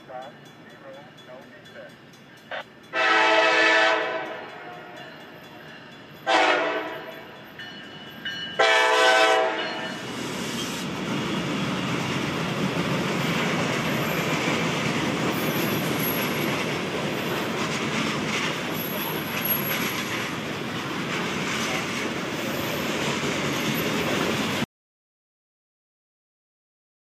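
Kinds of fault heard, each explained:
audio dropout to silence: At 24.64 s the sound cuts off mid-flow and the rest of the clip is dead silence, with no room tone. The likely cause is a lost input, such as a disconnected device or mute, while recording continued writing silence.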